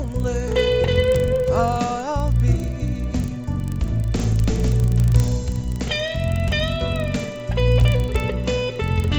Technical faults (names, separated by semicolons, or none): resampler restarted on every block